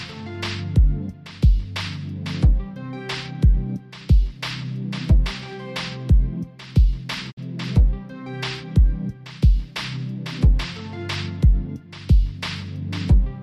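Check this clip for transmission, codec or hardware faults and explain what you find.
One fault: a digital broadcast dropout at 7.30 to 7.39 s. The sound fades out over about 20 ms and falls silent, leaving a hole of roughly 48 ms before the audio resumes further along. That points to the receiver losing the digital stream or rejecting frames that failed their checksum, then muting until valid frames arrived again; the gap fits two lost frames. Whatever was transmitted during the hole never reached the output.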